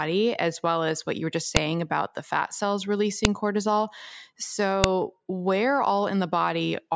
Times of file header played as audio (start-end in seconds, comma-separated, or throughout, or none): 1.57, 3.25, 4.84